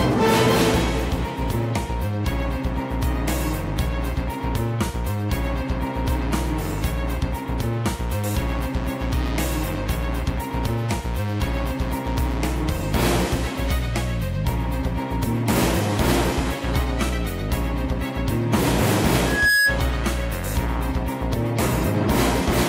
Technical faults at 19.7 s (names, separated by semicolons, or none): loudspeaker feedback squeal